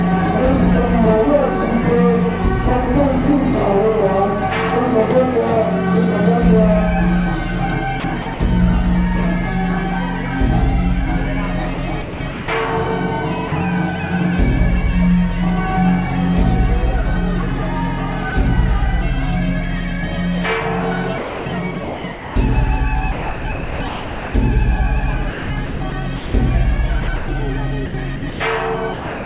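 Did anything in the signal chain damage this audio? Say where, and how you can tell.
Yes. The damage is at the call-processing stage, on the sending side, heard through a call path limited to about 4 kHz, which fits G.711 at 64 kbps.

Sound chopped by the voice detector appears at 8.0–8.4 s, 11.74–12.48 s, 21.18–24.34 s and from 25.3 s to the end. The sound keeps breaking, and parts of it are replaced by comfort noise, with about 1.8 s replaced in the 21.18 s stretch. The likely cause is a voice detector switching transmission on and off repeatedly.

Sound dropped by the voice detector occurs as single short gaps at 13.48–13.52 s and 18.3 s. Each is one hand-over to comfort noise, not a flicker. Unlike packet loss, there are no clicks or smeared concealment, which likely means the detector briefly judged the sound to be background.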